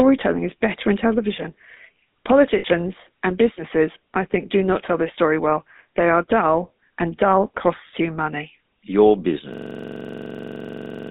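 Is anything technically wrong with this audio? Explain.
Yes. Throughout, the speech has a buzzy, gravelly roughness confined to roughly 200 Hz to 3.7 kHz. That band and texture point to the GSM full-rate codec, which fits a 13 kbps GSM link.

At 2.58 to 2.65 s, just before "and businesses I think", a brief metallic ring holds the sound for about 60 ms. These are lost GSM frames, concealed by repeating the last good frame.

From 9.54 s to the end, one 43 ms fragment repeats dozens of times as a machine-gun stutter at about 23.4 Hz. This is a system hang loop, where the sound hardware kept replaying a ring buffer that fits 2048 samples.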